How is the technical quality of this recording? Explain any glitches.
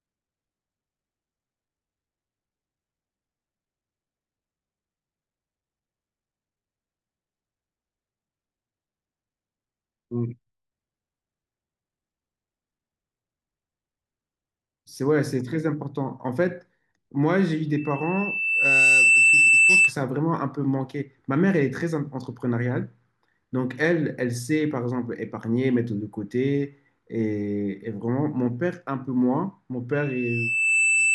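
The speech is marred by loudspeaker feedback squeal at 17.77–19.93 s and 29.92 s to the end. Microphone-to-speaker loop gain exceeds unity at 2.6 kHz, so a tone swells over roughly a second, first well above the speech, then somewhat above it. On a spectrogram it forms a bright horizontal line at 2.6 kHz.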